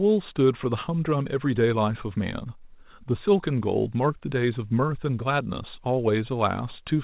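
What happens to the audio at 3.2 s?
Nothing goes wrong at 3.2 s: the speech there passes intact through the call path, whose narrowband sound with nothing above 4 kHz fits a G.711 A-law codec at 64 kbps.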